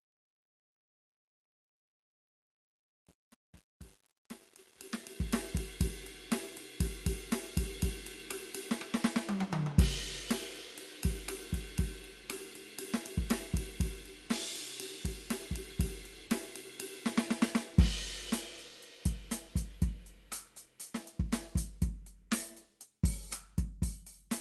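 From 0.0 to 5.38 s, the fade-in has truncation distortion: without dither, the quiet start turns gritty, which fits an 8-bit gain stage. At 16.27 s, about 20 ms of the music drops out and is replaced by comfort noise, likely sound dropped by the voice detector when Opus DTX mistook it for background.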